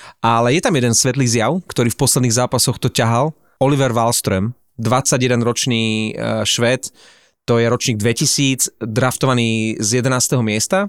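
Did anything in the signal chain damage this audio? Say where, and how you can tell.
No, nothing along the chain has left a mark on this speech that I can hear, so there's no stage to point at here.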